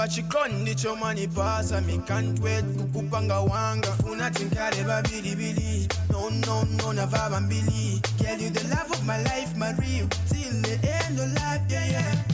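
Nothing faulty can be heard anywhere in this audio.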